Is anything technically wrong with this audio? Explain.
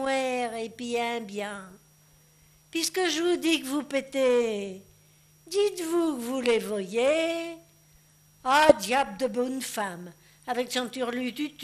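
Yes, there are two faults.

MP2 compression runs throughout the clip. The top end sounds dull, and a gurgling, grainy texture sits on everything. This is likely MPEG Layer II coding at a low rate, which fits roughly 80 kbps. With so few bits, the encoder shuts off the upper sub-bands and flickers them in and out. The bands that stay active are quantised coarsely, and that coarse quantisation is the source of the granular roughness heard across the whole clip.

DAB burbling occurs from 8.59 to 8.76 s: a short burst of burbling over the sound. Bit errors at a rate of around a fifth of a percent have slipped past error correction into the MP2 data. Corrupted samples put short blips of noise into single sub-bands, and corrupted scale factors that get through make sub-bands jump in level for up to a frame. The burst's length points to a run of about nine damaged frames, which produces the burbling effect.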